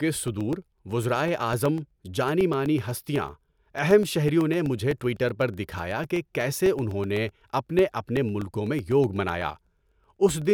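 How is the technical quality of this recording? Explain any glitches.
The recording is marred by one recurring fault. Periodic USB or driver dropouts: from 0.16 to 10.42 s, something blocks the audio path every 0.125 s, discarding about a millisecond of speech and leaving silence. The result is a steady ticking, eight per second, audible only under speech.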